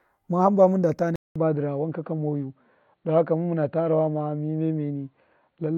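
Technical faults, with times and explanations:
1.16–5.77 s: input switched to a poorer device, likely mid-recording; after 200 ms of silence, nothing passes above 4.4 kHz, so speech turns dull at unchanged level.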